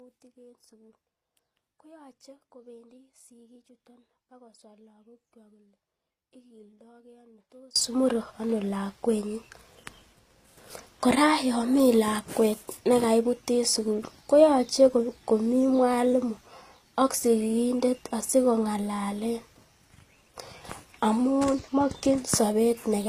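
A speech recording that opens already in an audio dropout to a faint residue: from the start until 7.76 s the voice is reduced to a faint leak roughly 30 dB below its normal level, then snaps back abruptly at "mure ano lakwenyin". On a waveform this shows as a near-flat trace with a sudden step up, and on a spectrogram as a dim band ending in a hard vertical edge. The likely cause is a signal loss upstream while the rest of the path stayed live. Throughout, the sound has nothing above 14.9 kHz, a flat ceiling on the spectrogram, which points to transcoding between lossy codecs, an Opus stage at around 48 kbit/s followed by HE-AAC at 24 kbit/s, whose artefacts stack.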